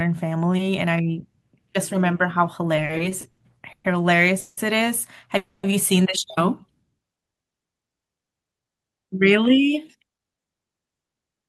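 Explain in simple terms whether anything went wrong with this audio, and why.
Between 2.75 and 3.86 s the speech hits repeated stalls (stutter). The audio catches seven times, with the last sound held over each gap, the longest lasting 120 ms. Packets kept arriving late, so the buffer kept running dry. Nothing's lost, but it drags.

Then there are two call audio freezes, at 4.40 to 4.59 s and 5.37 to 5.65 s. The sound hangs as a drawn-out buzz for 170 ms and then 260 ms, never going silent, and picks up where it stopped. The likely cause is packets held up in transit.

From 7.82 to 10.55 s there's a jitter buffer speed-up. After the delays, audio had piled up, so the receiver snipped out tiny slices, about a third of a second in total. Speech runs at 111% speed with unchanged pitch, sounding rushed.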